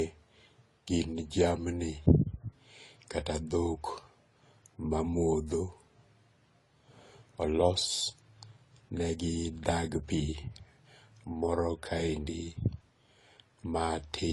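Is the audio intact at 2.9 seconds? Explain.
No, not really. At 2.9 seconds, as everywhere else in this speech clip, you're hearing transcoding between lossy codecs. There's nothing above 12 kHz, and the smeary, swirly AAC-style artefacts sit under Opus's own graininess, both at once. That's the signature of one lossy encode being re-encoded by another, which spends bits faithfully preserving the first codec's damage. It likely went through low-rate AAC and then Opus.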